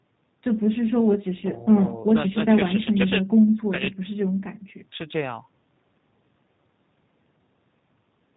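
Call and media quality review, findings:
G.729 codec, throughout, 0 to 8.4 s. Speech plainly rough and synthetic, band-limited to 4 kHz. Consistent with an 8 kbit/s G.729A path: each 10 ms frame rebuilt from a vocal tract filter, a pitch predictor and sparse pulses, so fine waveform detail is lost. The call microphone stage only high-passes the lowest bass, so the 4 kHz ceiling comes from the codec.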